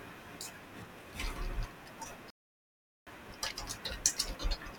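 At 2.30 s the speech cuts to silence for about 0.76 s, resuming at 3.07 s: a playback stall, likely the player running out of buffered data.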